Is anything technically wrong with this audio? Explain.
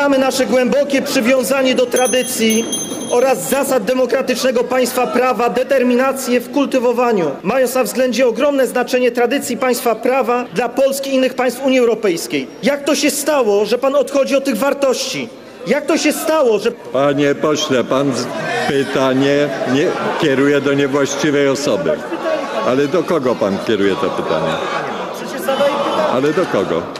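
No, nothing technically wrong can be heard in this audio. No point in the clip stands out as faulty.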